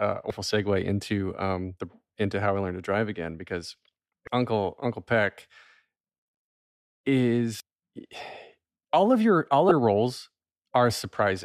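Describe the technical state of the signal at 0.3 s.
At 0.30 s there is a brief burst of damaged data in a compressed stream, lasting only about 4 ms, just before "segue into um the". Corrupted bytes at that point make the decoder misread the frame and resynchronise on the next valid header, producing a short chirp, click or brief hole. On a spectrogram it shows as a thin vertical disturbance; on the waveform, a tiny discontinuity breaking the speech envelope.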